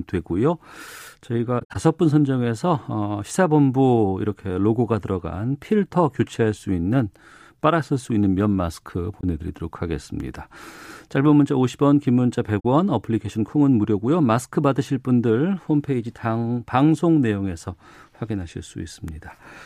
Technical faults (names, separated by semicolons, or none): corrupt frame concealed